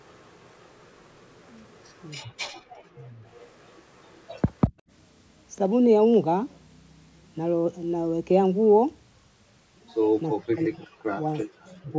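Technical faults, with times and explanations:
0.0–2.1 s, 3.32–4.41 s and 11.61–11.68 s, echo leak: a faint copy of the speech trails the original by 360 ms, roughly 30 to 35 dB down. This is likely residual loudspeaker pickup that the far end's echo canceller failed to remove and sent back.
2.53–2.66 s, background gated by the echo canceller: the room sound drops by about 40 dB for about 150 ms, then returns. The canceller clamped the microphone path while its loudspeaker was active, then released it.
2.94–3.17 s, 10.3–11.25 s and 11.81–11.95 s, speech suppressed in double talk: the talker's level dips by roughly 25 to 40 dB, for about 700 ms in the middle run. This is likely the canceller attenuating the talker along with the echo while both sides spoke at once.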